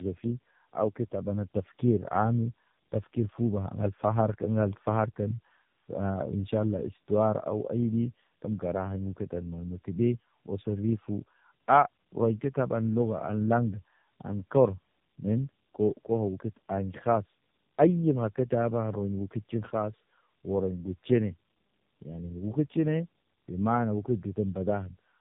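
From start to finish the speech shows tandem speech coding. It passed through two low-rate speech codecs in a row, with a plain telephone-rate link between them. The sound points to something like G.729A at 8 kbit/s, then AMR-NB near 7.95 kbit/s. The second coder had to rework the first one's damaged output. Errors stacked up. The result is rough, muffled and warbly, and nothing reaches above 3.8 kHz.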